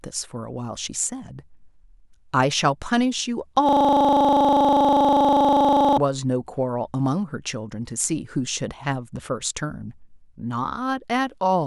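From 3.69 to 5.98 s, a system hang loop repeats one 40 ms slice at 25 Hz: the driver froze, leaving a rapid buzzing stutter.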